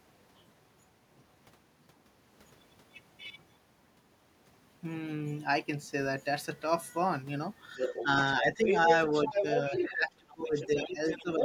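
A speech clip where an echo canceller likely failed to remove loudspeaker pickup, so the other side's voice leaking through appears at 7.77–8.04, 8.38–8.78, 9.12–9.93 and 10.29–11.44 s, first a little below the talker, then roughly level with it, then fainter. The same canceller likely mishandled double talk, causing speech suppressed in double talk: slight dips from 7.78 to 8.88 s, then drops of up to about 20 dB between 9.25 and 11.42 s.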